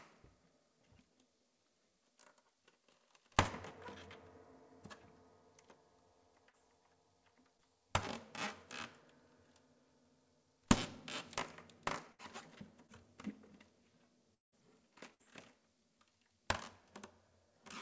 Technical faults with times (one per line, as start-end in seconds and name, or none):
6.50-6.55 short concealed packet loss
7.57-7.60 short concealed packet loss
12.12-12.21 burst of packet loss
12.87-12.90 short concealed packet loss
14.34-14.54 long network dropout
15.14-15.21 burst of packet loss